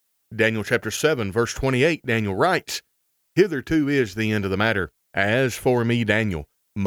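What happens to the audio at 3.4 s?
Nothing goes wrong at 3.4 s: the speech runs on there without any dropout, click, distortion or other fault.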